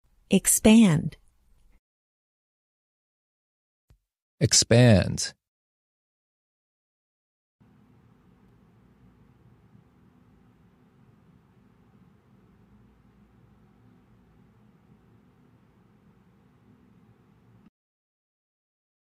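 A repeated buffer occurs at 4.54 to 4.56 s. Fresh audio failed to reach the output in time, so the same 5.3 ms slice, which fits a 256-sample buffer, played four extra times with a hard join at each repeat. Around 20 ms of sound is lost, heard as a brief buzzy stutter. A second, smaller repeat at 8.49 s replays the slice just once, skipping a few milliseconds and leaving a single click.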